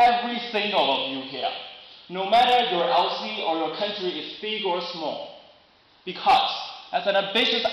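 Corrupt frame concealed at 1.40 to 1.44 s: the decoder detected damaged AAC data and masked it over a brief 36 ms.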